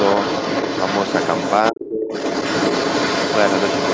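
A second voice runs under this speech clip from the start to 1.7 s and again from 2.12 s to the end, sitting only a few decibels below the main talker, roughly 5 dB down. It is the other side's voice leaking through, most likely loudspeaker playback that the echo canceller left in the microphone signal. It is a second talker arriving alongside the main one, not a delayed repeat of the main talker's own voice as with room reverberation or a feedback loop. Between 1.71 and 2.13 s, under half a second, the main voice sinks sharply, by about 25 dB at its deepest, and then recovers. This dip is speech suppressed in double talk, likely the canceller clamping down while both sides were active. It is a gain drop tied to overlapping talk rather than a clean gap from lost packets or a steady level change from automatic gain control.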